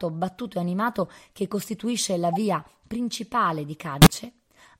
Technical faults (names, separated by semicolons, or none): corrupt frame decoded